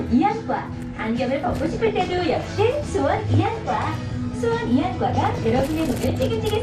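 A recording of everyday sound, dull and granular throughout with a gurgling edge, which is most likely MP2 compression at a rate around 80 kbps: upper sub-bands drop out and flicker, and the remaining bands are coarsely quantised. DAB burbling appears from 1.53 to 2.52 s, 3.14 to 3.88 s and 5.15 to 6.15 s, where burbling distortion sits over the sound. Residual bit errors, under one percent, corrupt samples, putting short blips of noise in single sub-bands, and scale factors, so that sub-bands jump in level for up to a frame.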